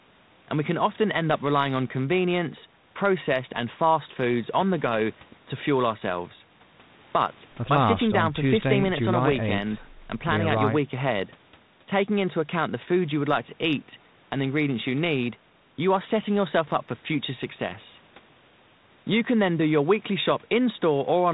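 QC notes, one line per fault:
No faults heard in this speech clip.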